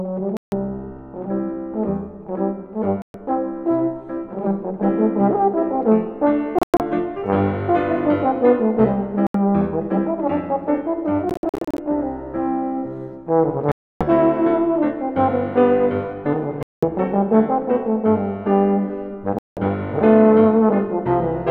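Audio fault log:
0.37 to 19.60 s, Bluetooth dropout: The sound cuts to silence with abrupt or briefly faded edges at 0.37, 3.02, 6.59, 9.27, 11.29, 13.72, 16.63 and 19.39 s, for 0.08 to 0.29 s each. The gaps at 6.59 and 11.29 s are broken into several short holes. Playback resumes further on, as if it kept running. Late packets likely never reached the headphones.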